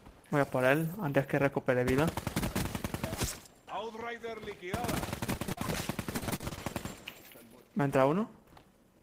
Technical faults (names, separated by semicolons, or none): repeated packet loss (robotic sound)